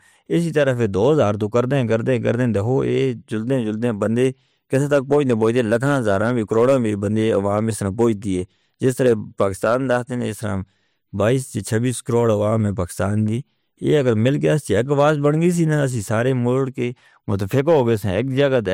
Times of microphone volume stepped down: none

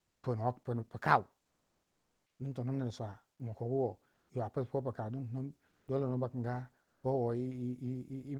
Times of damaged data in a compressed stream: none

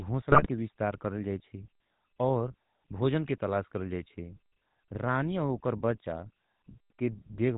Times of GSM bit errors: 0.32-0.49

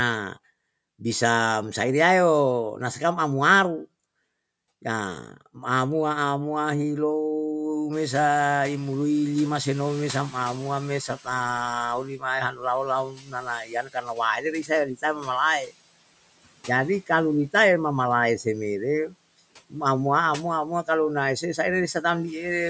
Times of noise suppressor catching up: 7.92-12.13

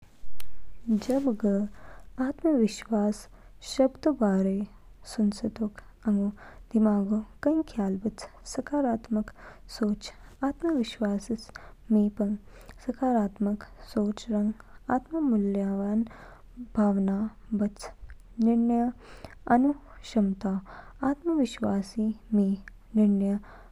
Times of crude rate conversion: 16.64-21.07

